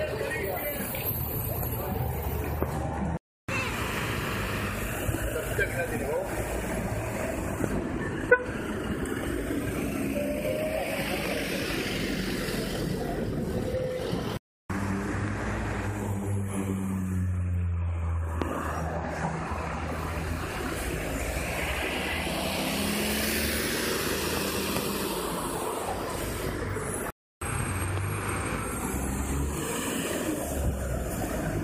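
Loud pops strike at 7.64–7.66, 11.26–11.28, 18.42–18.44 and 24.37–24.39 s. Each is a single sharp pop, about 15 dB above the sound, about 20 dB at 18.42 s. A voltage spike, likely from a switch or static, caused them.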